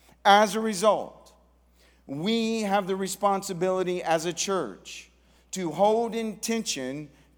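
Nothing in this speech recording points to a technical fault: the signal holds steady throughout, with no gaps, level jumps or unexpected changes in its character.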